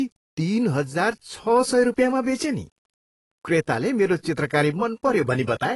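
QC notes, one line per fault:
Throughout: low bit depth without dither. A grainy, rough texture clings to the speech and shifts with it, most exposed on quiet syllables and decays, where soft detail breaks up into a gritty sputter instead of fading smoothly. The likely cause is requantisation to few bits by plain rounding with no dither, consistent with about 10 bits. The error stays locked to the waveform, sitting roughly 50 dB below the signal, so it sounds like distortion rather than steady hiss.
Throughout: AAC compression. The speech sounds dull and smeared, with nothing above 11.5 kHz, so sibilants lose their air and edge. Sustained vowels and fricatives carry a warbling, fizzy texture, and the codec damage is plainly audible. This points to AAC-LC coding at a low bitrate, around 37 kbps. At that rate the encoder lowers its cut-off and quantises the remaining frequency bands coarsely, leaving gaps that shift from frame to frame.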